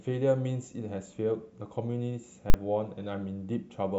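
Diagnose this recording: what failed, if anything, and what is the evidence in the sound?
Invalid numbers at full scale, 2.50 to 2.54 s, in this speech clip. A calculation in the processing stage produced infinite or invalid sample values, which were clamped to the largest positive or negative value. The output then held flat at one extreme value, far beyond the speech peaks, for the whole 40 ms block. A block that short is heard as a single violent bang rather than two separate pops, and no speech is audible within it.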